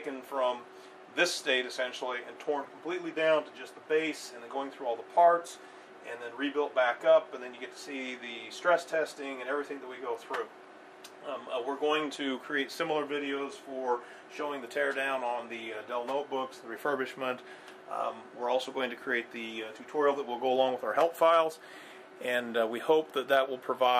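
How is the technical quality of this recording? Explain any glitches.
No technical faults can be heard in this recording; the signal comes through intact, with no dropouts, clicks, distortion or other glitches to explain.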